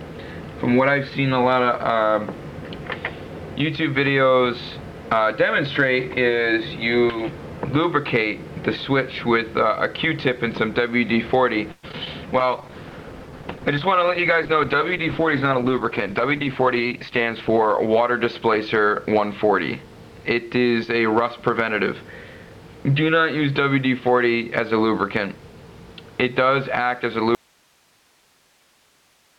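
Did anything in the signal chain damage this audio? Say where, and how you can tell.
Yes. The damage sits in the call path: network, jitter buffer and codec, then a loss of signal at the end.

Network stage. From 11.71 to 12.08 s there is repeated packet loss, heard as a robotic sound. Four gaps hit in quick succession, the longest 117 ms. Each is patched by stretching the previous sound, so about 39% of that span is concealment. It sounds choppy.

Jitter buffer. From 12.26 to 12.72 s a jitter buffer slow-down follows. The receiver repeats single pitch periods to rebuild its reserve, adding 56 ms. Playback runs at 89% speed with unchanged pitch, so sounds drag.

Codec stage. From 12.40 to 20.18 s there is a call bitrate drop, from 128 to 13 kbps. It stays at the lowest rate for 5.28 s. Opus codes coarsely and trims the top end, so the audio turns muffled and watery until the rate recovers.

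Jitter buffer again. From 14.93 to 17.09 s a jitter buffer speed-up trims short pitch-period slices. About a tenth of a second is removed in total. Playback runs at 105% with the same pitch, and the sound feels slightly hurried.

Signal loss. At 27.35 s the sound cuts abruptly to hiss and stays there to the end. Only a residue about 40 dB down remains. This is not a fade. It is likely an audio dropout to a faint residue, with the input losing the wanted signal while the path after it stays live.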